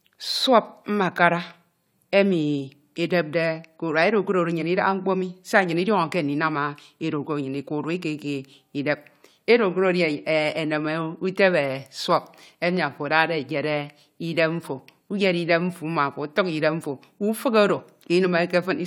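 No technical faults are audible.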